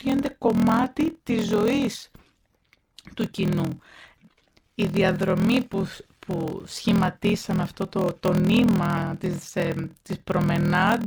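From start to end the speech carries a steady buzz at about 41.7 Hz, the signature of a block size mismatch (padded). One stage writes blocks that fit a 1024-sample size, but the next reads larger ones and fills each remainder with silence. The speech runs at 0.889 times normal speed with pitch nearly unchanged. The waveform shows short flat gaps at regular spacing, and the spectrogram shows thin vertical stripes at that rate.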